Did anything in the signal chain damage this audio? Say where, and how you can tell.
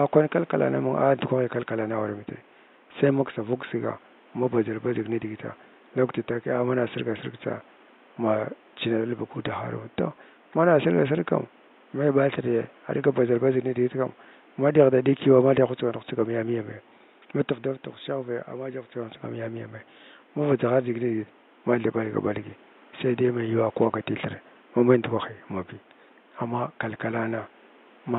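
No, nothing in the signal chain damaged this audio.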